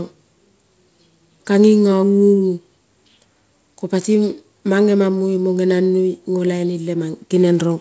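Nothing's wrong with this speech clip; it sounds like it came through a call connection, with nothing above 8 kHz, which fits a wideband codec such as G.722, and there's nothing technical to flag.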